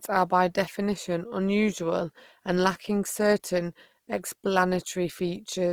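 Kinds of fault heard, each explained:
Opus compression: a low-rate Opus encoder in music mode, likely around 24 kbps, filled starved bands with noise, leaving the speech plainly grainy and rough throughout.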